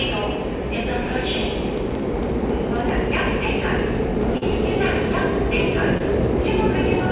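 From 0.10 s to the end, word clock ticks repeat about every 0.04 s: an unlocked receiver clock, off by roughly 500 ppm, drops or repeats one sample per slip. Short concealed packet losses at 4.38–4.44 s (40 ms filled) and 5.98–6.02 s (about 20 ms) come across as brief smears where the receiver extrapolated the missing audio, within the call path's G.711 band ending at 4 kHz.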